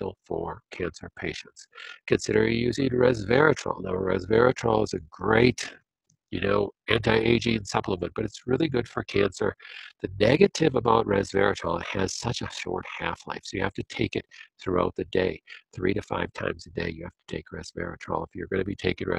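Overlap-add ripple runs throughout, a level flutter of about 11 dB at around 40 Hz, because windowed frames were rejoined with overlaps that don't sum to constant gain, roughening the sound.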